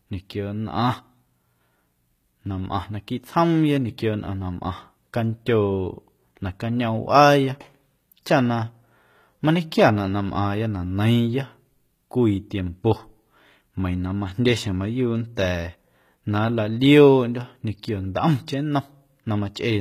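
Speech, with plainly audible HE-AAC compression throughout: treble above the crossover sounds synthetic and sibilants gritty, nothing above 14.9 kHz, likely a low bitrate near 20 kbps.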